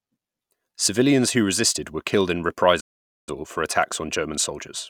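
Speech clip with a playback stall. The sound cuts to silence at 2.8 s for about 470 ms, until 3.29 s. The player likely ran out of data or was blocked.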